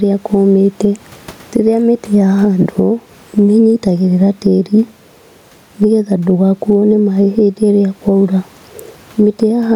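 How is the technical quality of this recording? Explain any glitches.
The speech recording has one clear problem running the whole way through: gain pumping. Throughout, the gain swings by around 10 dB, with the room noise sitting about 40 dB below the speech. It's likely from the mic gain being cranked way too high with a fast limiter or compressor clamping down on every loud syllable. The result is squashed speech.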